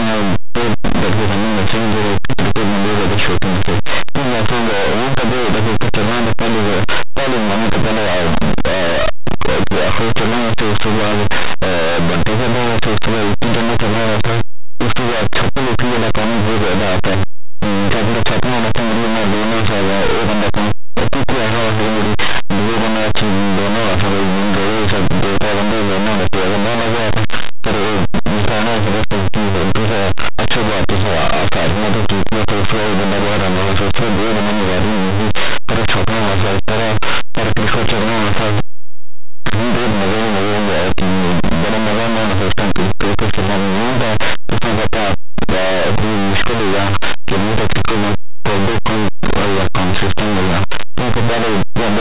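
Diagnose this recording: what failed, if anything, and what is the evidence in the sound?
Linear audio read as companded, throughout the speech: a sample-format conversion fault. Plain linear 8-bit samples are expanded as mu-law codes, so values just on one side of zero become the largest outputs while those on the other side stay small, producing constant harsh distortion.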